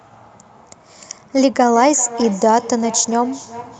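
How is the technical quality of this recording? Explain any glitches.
The recording has one significant flaw: a feedback echo between two devices, from 1.73 s to the end at 3.80 s. A second device in the room plays the call back, and the microphone captures it; the echo canceller removes only its own device's playback. The speech returns roughly every 0.4 s, thin and ringing, peaking about 15 dB below the direct speech.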